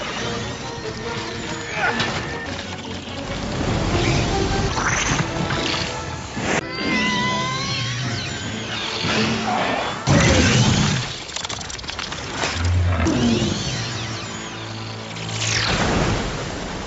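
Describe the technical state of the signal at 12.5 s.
At 12.5 s the signal is intact, with no dropout, glitch or distortion, only the steady 8 kHz upper limit that the call path's Opus coding at 64 kbps gives the whole sound.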